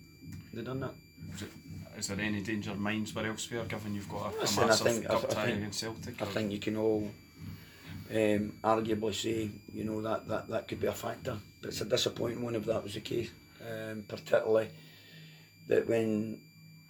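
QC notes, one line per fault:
Throughout, switching supply whistle: a high, thin whistle sits under the audio the whole way, its pitch wandering between about 2.27 and 2.43 kHz, roughly 30 dB below the signal. A switching power supply is cycling at an audible rate, in burst mode or beating against another supply, and as its load shifts the switching frequency slides, so the tone drifts rather than holding one pitch.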